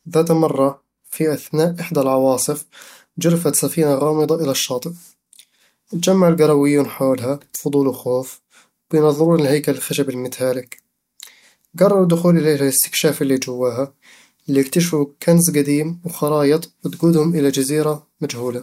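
Nothing in the speech recording stood out as a technical problem on listening.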